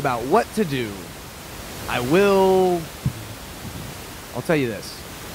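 No technical faults can be heard in the speech here, with the room's background noise sitting about 15 dB below the voice as part of the recording itself.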